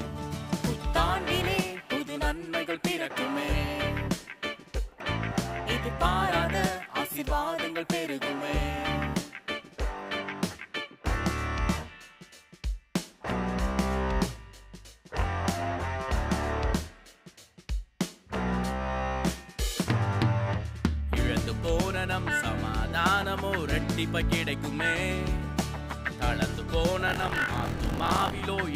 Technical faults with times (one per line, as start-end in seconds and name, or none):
27.06-28.41 buffer tearing